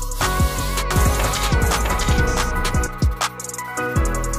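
From 0.91 to 2.87 s a doubled audio track appears: a second, equally loud copy trails about 0.7 s behind, likely from a parallel capture path or misaligned edit. Unlike room echo, it carries no decay or reverberant colour, and it switches on and off abruptly.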